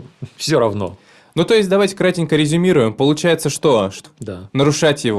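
Speech, with one stream segment skipped between 4.05 and 4.10 s. The audio jumps abruptly forward, with a short blip at the join. Part of the programme is missing. The likely cause is a stream segment that failed to load, so playback resumed with the next one.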